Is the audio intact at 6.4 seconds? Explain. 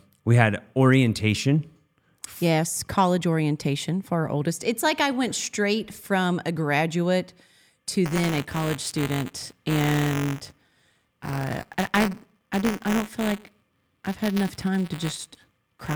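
Yes, the audio is intact at 6.4 seconds, with no dropout, click, distortion or other fault at that point.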